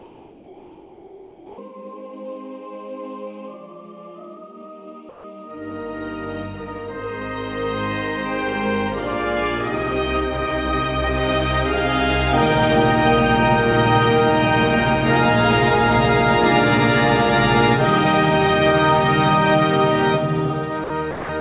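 From 0.00 to 1.58 s and again from 5.09 to 5.24 s, discontinuous transmission has likely stopped the sender during pauses. The receiver fills the gaps with comfort noise in place of the background: a steady, featureless hiss about 4 dB quieter than the real ambience it replaces.

Near the end, the voice detector has likely mistaken quiet sound for background. This is sound dropped by the voice detector, at 20.84 to 20.90 s and 21.11 to 21.29 s: 60 ms and then 180 ms of audio vanish into that same flat noise. Throughout, the band stops near 4 kHz, which fits a G.711 call path.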